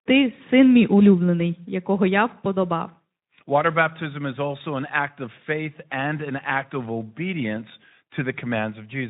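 No technical faults are audible.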